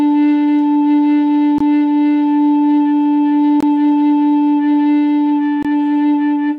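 The music was delivered in 2.0 s chunks with silence inserted at each join, a gap between chunks of about 21 ms, likely from codec padding or late chunk starts. The audio drops out abruptly at 1.58, 3.60 and 5.63 s.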